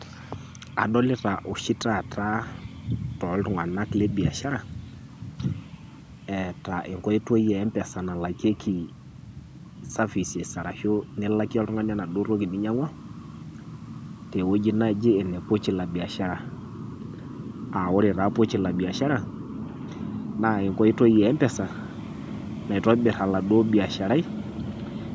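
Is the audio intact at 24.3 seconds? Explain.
Yes, the audio is intact at 24.3 seconds, with the speech passing cleanly through the call's microphone processing and no fault present at that moment.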